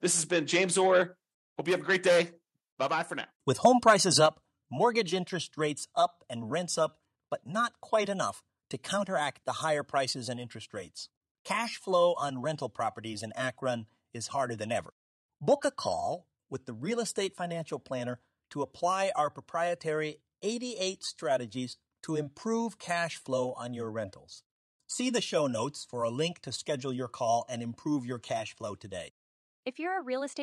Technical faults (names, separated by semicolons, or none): microphone volume stepped down; microphone overload